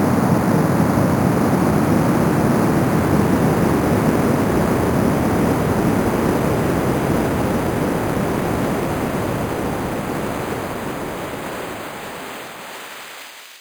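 Throughout the clip there is imaging from sample-and-hold upsampling. The sound was raised from an 11 kHz rate to 44.1 kHz by repeating each sample with no smoothing filter, so a mirrored copy of the original band appears from about 5.5 to 11 kHz, roughly 22 dB below the signal. It is heard as a metallic fizz that rises and falls with the sound itself. Unlike aliasing, which folds content down into unrelated tones, this fizz mirrors the real band upward.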